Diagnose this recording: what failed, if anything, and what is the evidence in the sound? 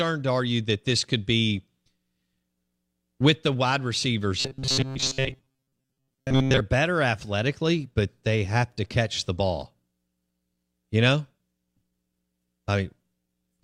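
From 4.40 to 6.61 s, between "with the wide" and "better athletically but they", the speech turns into robotic sound from repeated short buffers, a rigid metallic buzz at 133 Hz. That's likely a starved driver buffer looping chunks of about 7.5 ms for most of the stretch while the real audio is skipped.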